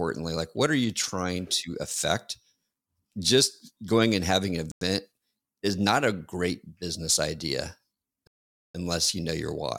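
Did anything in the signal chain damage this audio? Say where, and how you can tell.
Yes, at the playback end. The speech drops to dead silence twice, for about 0.1 s at 4.72 s and for nearly half a second at 8.27 s, right after "a great business idea", and each time it resumes. That pattern points to a Bluetooth stall, likely caused by radio interference delaying packets until the headphones' buffer emptied, with playback waiting for retransmissions to catch up.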